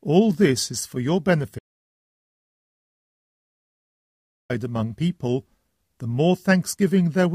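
At 1.59 s the sound just stops dead, and nothing comes back until 4.50 s, so you lose roughly 2.9 s in one go. That's an audio dropout to silence: the gap is pure silence, with no room tone or hiss underneath, which tells you the recorder kept writing while its input had vanished. Most likely a device dropped off or a link failed briefly. Whatever happened in that stretch is simply gone.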